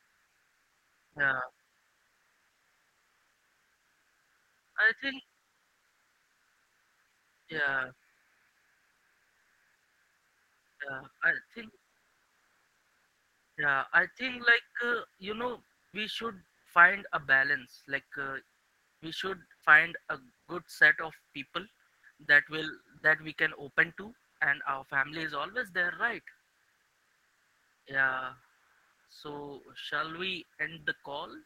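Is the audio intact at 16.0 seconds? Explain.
No. The sender's voice activity detection, likely Opus discontinuous transmission, kept toggling transmission on and off from 15.77 to 24.39 s, so this is sound chopped by the voice detector. About 1.12 s of quiet syllables and word edges became comfort noise or a brief fill, leaving choppy speech.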